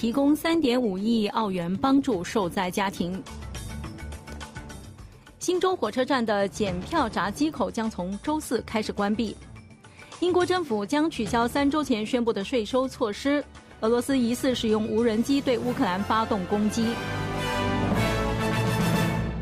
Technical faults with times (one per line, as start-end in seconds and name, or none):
0.00-6.00 adaptive stream starting at a low bitrate